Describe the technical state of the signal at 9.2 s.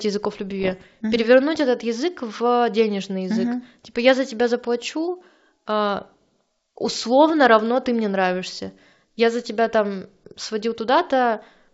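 At 9.2 s the speech is intact, with no fault present and the G.722 wideband telephone coding at 64 kbit/s running as it should, carrying the speech with its usual bandwidth up to around 7 kHz.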